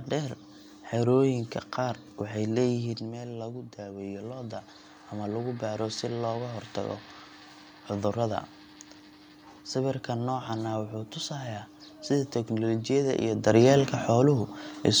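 Between 2.17 and 4.58 s the voice and the room noise swell together by about 4 dB over roughly two seconds. This is automatic gain rising: the input fell about 9 dB as the talker moved, around 3 s, and the gain control slowly compensated.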